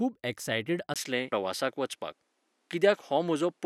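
Input switched to a poorer device, at 0.94 s and lasting to the end: after a brief gap of about 20 ms, the speech comes back duller, with nothing above 13 kHz, a level shift of roughly 5 dB and a new background noise sitting around 50 dB below the voice. The likely cause is the system handing its input over to a different microphone or headset profile that passes a narrower band and brings its own tone and noise floor.

Damaged data in a compressed stream, at 1.32 s: a momentary glitch cuts into the already narrowed speech. Here some of the encoded bytes were corrupted, so the decoder misread the affected frame, lost its place in the stream and had to hunt for the next valid frame header.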